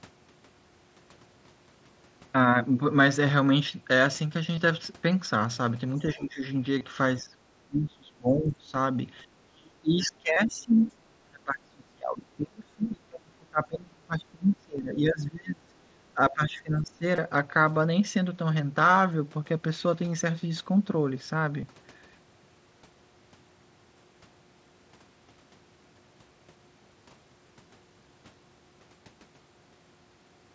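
At 4.56 s a tiny stretch of the speech, about 15 ms, is replaced by a near-seamless continuation of the waveform just before it. This is concealed Bluetooth headset packet loss: the headset link dropped audio, and the receiver patched the gap by repeating the best-matching recent cycle. The same masking recurs at 6.78–6.81 s, 10.34–10.36 s, 14.78 s, 17.16–17.18 s and 21.61 s, with gaps of about 7.5 to 22.5 ms.

From 6.14–6.42 s the talker's level sinks by roughly 15 dB. It happens again at 7.21–7.36 s, 7.67–8.74 s, 9.47–10.71 s, 10.88–10.93 s, 11.29–15.71 s and 16.14–17.04 s. The deepest dips reach roughly 30 to 35 dB, where the speech breaks into pieces or vanishes. The longest stretch, around 11.3–15.7 s, loses about four seconds of clear level. This is speech suppressed in double talk, likely from both parties talking at once. The echo canceller cannot tell the near voice from the loudspeaker echo, so it attenuates everything.

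At 10.81–10.89 s a brief scrap of a second voice surfaces, about 25 dB below the talker. This is the other side's voice leaking through, likely because the far end played on a loudspeaker and the echo canceller failed to remove all of it from the microphone. The leak lands right at the edge of a short suppression dip, and the wideband-call bandwidth, nothing above 8 kHz, frames all of it.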